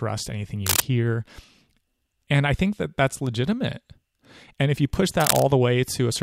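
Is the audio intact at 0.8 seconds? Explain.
No. From 0.66 to 0.82 s there is cable scratch noise: a dense, uneven burst of scratchy, rustling noise lying over the speech at roughly the same loudness as the speech itself. The likely cause is a worn cable, connector or control being moved, so its contact resistance fluctuates rapidly and injects irregular noise into the signal path for as long as the movement lasts.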